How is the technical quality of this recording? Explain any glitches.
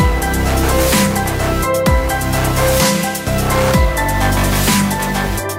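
No glitches can be heard; the signal is continuous and technically intact throughout.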